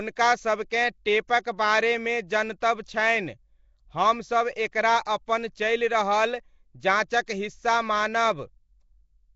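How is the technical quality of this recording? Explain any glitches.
The recording is held back by plainly audible low-rate codec damage throughout, plus a series of brief pre-echo smears on sharp onsets.

Nellymoser compression is the likely cause of the constant degradation. A block codec with a fixed, meagre bit budget drops weak spectral bands entirely and patches them with noise, and nothing survives above 7.7 kHz. The damage is plainly audible and fits a rate around 32 kbps. The speech carries a rough, hissy halo and a smeared, underwater character from start to finish.

Pre-echo appears at 0.70, 1.28, 2.60, 4.72, 5.05 and 7.26 s. When a sharp attack lands late in a coding block, the quantisation noise sized for that loud moment is spread across the whole block, including the quiet stretch just before it. Here that noise runs about 12 to 16 ms ahead of each attack. It is heard as a short hiss leading into the onset, which then sounds softened rather than crisp.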